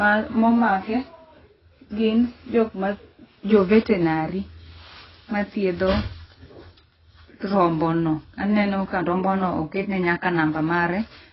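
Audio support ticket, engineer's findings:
AAC compression across the whole speech clip. Top end stops dead around 5.6 kHz, so it's dull, with fizzy, warbling sibilants and smeared consonants. Likely cause: an AAC-LC encode pushed hard, damage level sounding like roughly 16 kbps. Encoder quantised coarsely and dropped the cut-off low. Can't restore what's gone; needs a higher-bitrate source.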